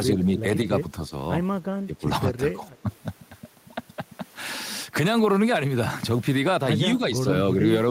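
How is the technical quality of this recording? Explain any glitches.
The speech dips in five places: 0.16–0.45 s, 1.58–2.07 s, 2.55–2.63 s, 2.82–2.89 s and 6.97–7.25 s. The deepest and longest loss is near 1.6–2.1 s, falling about 20 dB; the rest are shallower, brief pulls. This is likely speech suppressed in double talk: with both ends talking, the echo canceller mistook this voice for returning echo and turned it down.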